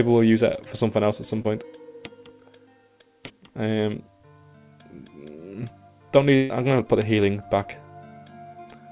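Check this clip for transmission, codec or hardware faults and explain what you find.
Two kinds of transmission fault appear, on a narrowband call path whose empty band above 4 kHz fits G.711 A-law coding.

Short concealed packet loss occurs at 0.56–0.60 s, 1.42–1.46 s and 3.26–3.32 s, with 20, 20 and 40 ms missing. The receiver bridged each hole by extending the preceding sound, heard as a brief smear or wobble. A spectrogram shows the last sound's spectrum stretched flat.

A burst of packet loss runs from 6.36 to 6.52 s, losing 140 ms. Concealment stretched the last sound for 138 ms while turning it down, giving a held buzz or fading hiss before the audio resumes further on. A spectrogram shows a decaying frozen band, and the waveform tapers then jumps.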